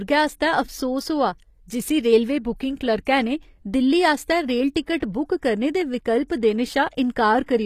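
The whole recording has likely passed through HE-AAC compression, with the treble rebuilt by copying lower bands upward, which fits a low bitrate around 24 kbps. Damage is plainly audible: upper harmonics don't line up, s sounds turn gritty or metallic, and nothing remains above 14.9 kHz.

From 0.34 s to 7.26 s, two unsynchronised clocks drift apart by roughly 30 parts per million, producing clock slip clicks. Around ten ticks arrive about every 0.7 s, which fits single-sample slips, and each is a brief regular click in the speech.

Between 4.97 s and 5.02 s, a sharp attack fell late in a codec block, so quantisation noise sized for the loud part spilled backward across 51 ms. This pre-echo is heard as a short hiss ahead of the onset, which sounds softened and smeared.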